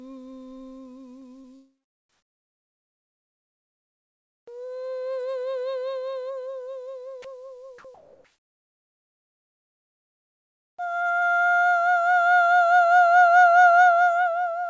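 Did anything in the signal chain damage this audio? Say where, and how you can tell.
Yes, the damage happens in the call path, in the network and call-processing stages rather than in the music itself.

First, short concealed packet loss at 1.20–1.24 s and again at 1.42–1.45 s. Each time about 20 ms of the music never reached the decoder in time. The receiver patched the hole by extending what it had just played and then blended back into the real signal, so you hear a quick smear or wobble instead of a clean gap.

Next, comfort noise in place of the background, from 2.09 to 4.47 s and from 7.94 to 10.78 s. The quiet stretches sit about 54 dB below the loud parts. The real background gives way to flat, featureless hiss, about 14 dB quieter in the first stretch and about 3 dB quieter in the second. That's likely the sender's discontinuous transmission stopping and the receiver synthesising noise until the sound picks up again.

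Finally, sound dropped by the voice detector at 7.22–7.24 s. A 20 ms sliver of the music is swapped for that same steady noise. The likely cause is the detector mistaking the music for background and briefly cutting transmission. Underneath all of this, the codec's top end stops at 8 kHz, which fits a 64 kbps G.722 stream.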